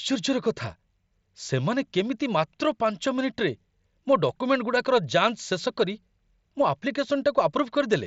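No technical faults are audible.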